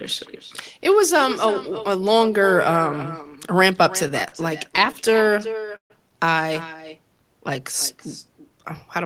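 Throughout the recording, no echo canceller is working at the far end: its loudspeaker feeds the microphone and the speech returns after the network round trip. The result is an echo with no canceller, a quieter, thinner copy trailing each phrase by roughly a third of a second at about 14 dB below the speech.

From 4.03 to 5.92 s, packets arrive late again and again, and the jitter buffer keeps running dry, producing repeated stalls (stutter). Nineteen brief waits, the longest 139 ms, are filled by stretching the last sound for 348 ms in total, about 18% of that span. Nothing is lost, but the speech drags and stutters.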